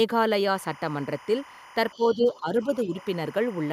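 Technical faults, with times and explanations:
0.55–3.72 s, timecode bleed: Linear timecode running at 25 frames per second has crossed from a nearby track or cable into the audio path and sits about 20 dB below the speech. Because the code is a square wave flipping between tones near 1 kHz and 2 kHz to encode its bits, it comes through as a constant chirping warble behind the talker from just after half a second to the end.
1.93–2.17 s, 2.33–2.40 s and 2.83–2.87 s, other side's voice leaking through: The far-end voice is likely playing from the talker's loudspeaker and back into the microphone, with the echo canceller failing to subtract all of it. What remains appears as brief, faint scraps of a second voice, roughly 25 dB below the speech in the first and longest stretch, and fainter still, around 30 and 35 dB down, in the two short bursts that follow.
1.96–2.68 s and 2.85–2.96 s, speech suppressed in double talk: Both ends were speaking together, and the echo canceller likely could not tell the near talker from the loudspeaker echo, so it turned everything down. 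The talker's voice drops by as much as about 10 dB over roughly half a second in the first span and a tenth of a second in the second, overlapping the leaked far-end fragments.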